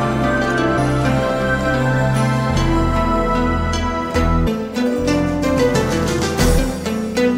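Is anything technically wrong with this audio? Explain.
Yes. The compressed stream carries damaged data at three points, about 0.77 s, 4.46 s and 6.57 s. At each, some bytes of the encoded file are wrong, so the decoder misreads those frames, loses its place in the stream and has to search for the next valid frame header before normal decoding resumes. Each one is heard as a very short chirp or blip, under 20 ms long, that cuts across the sound.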